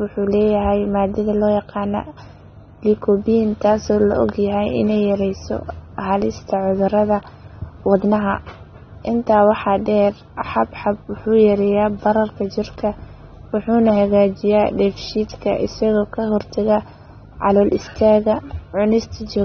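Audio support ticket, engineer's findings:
Dull, band-limited speech for the whole clip. No content above about 6.3 kHz. Sibilants smeared and fizzy, with a warbling texture on sustained vowels. Damage plainly audible throughout. Likely AAC compression, AAC-LC type. The encoder quantises each frame's frequency lines against a hearing model. Short on bits, it drops the top band and leaves spectral holes or fills them with substitute noise. The low cut-off and smearing fit a low bitrate around 24 kbps.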